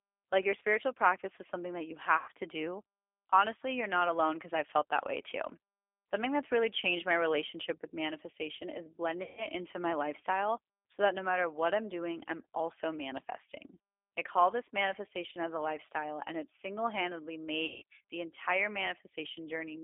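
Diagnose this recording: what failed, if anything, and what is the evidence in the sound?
The codec stage is at fault throughout. The speech is carried by the G.729 codec at 8 kbit/s, and its damage is plainly audible. The band is held to roughly 300 Hz to 3.5 kHz. Voiced sounds take on a rough, slightly synthetic buzz because the decoder rebuilds them from a vocal tract filter, a pitch predictor and a few pulses per frame. A simple telephone band-limit would sound dull but clean. This adds that model-built roughness.

The network stage lost packets three times, and the speech codec concealed each loss with packet loss concealment. The first is at 2.18–2.31 s, after "is something that you" and before "to do". The second is at 9.23–9.47 s, after "relationship with manifestation is" and before "into my lifestyle so". The third is at 17.66–17.83 s, after "and it single handedly" and before "the entire". 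About 100, 140 and 160 ms of audio went missing, which fits runs of five to eight 20 ms packets. In each gap, the decoder's pitch and filter are stretched into a buzzy tone or a coloured noise that fades. A plain dropout would give silence or a click instead, and this one leaves the voice weak for a short while after it resumes.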